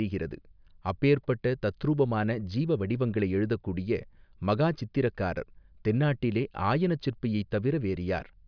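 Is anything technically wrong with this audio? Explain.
No, nothing technically wrong turns up anywhere in this speech recording, so there's no fault to point to here.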